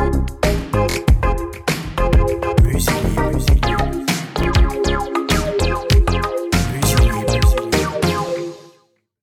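Short stutters at 0.91 s (a double repeat), 4.44 s and 5.92 s are repeated buffers: late data made playback replay each roughly 23 ms chunk, consistent with a 1024-sample buffer.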